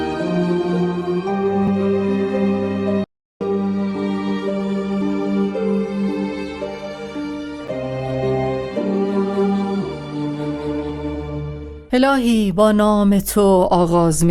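Two tiny hard-edged dropouts at 1.67 s and 7.68 s are a gap between stream segments: the timestamps of consecutive 6-second segments don't quite meet, so the player pads a few milliseconds of silence (roughly 3 and 6 ms) at each boundary, and nothing is actually lost. Separately, the audio cuts out from 3.04 to 3.41 s, a playback stall of about 370 ms, where the output goes silent mid-flow before picking up again, likely because the player ran short of data or its thread got blocked.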